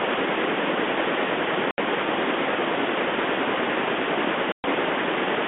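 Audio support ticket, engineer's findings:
Packet loss on the ADPCM call, at 1.71 s (70 ms gap, roughly seven packets) and 4.52 s (120 ms, roughly ten). Hard-edged silence, then a slightly distorted restart as the decoder's predictor and step size resync over tens of milliseconds. A clean dropout would resume at the correct level. The path is G.726 at 32 kbit/s, 250 Hz–3.5 kHz band, with light codec damage.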